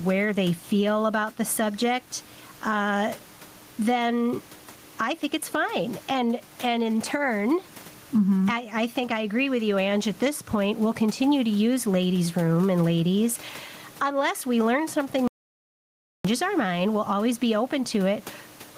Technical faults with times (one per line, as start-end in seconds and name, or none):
0.00-18.77 gain pumping
15.28-16.25 audio dropout to silence